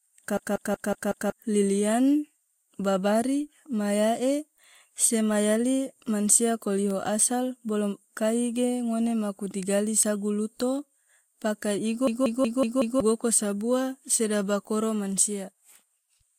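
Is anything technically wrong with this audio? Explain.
Yes. A system hang loop occurs twice in this speech, from 0.37 to 1.30 s and again from 12.07 to 13.00 s. Each time the computer or driver stalled while the sound hardware kept replaying its ring buffer, so a 185.76 ms slice, which fits an 8192-sample buffer, repeats five times at 5.38 Hz. It sounds like a machine-gun stutter, and about a second of the real speech is lost at each spot.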